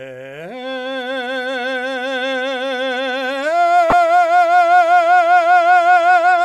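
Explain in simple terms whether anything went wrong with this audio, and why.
Something did go wrong, in one brief spot. Between 3.90 and 3.93 seconds, the compressed data for a couple of frames of this music was damaged, with some of its stored bits flipped, and the player decoded those frames anyway. This is a corrupt frame decoded. The garbled data put sound energy at the wrong pitches, so for that split second you hear a sharp chirp or burst of noise, very loud.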